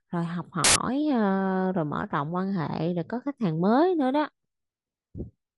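Speech, interrupted by a hard-edged burst of very loud white noise from 0.64 to 0.76 s. It starts and stops abruptly, with no fade. This is file tags played as audio. An embedded cover picture, stored as compressed image data, was read as if it were sound samples. Compressed data looks nearly random. So it plays back as loud, flat static lasting about 0.12 s.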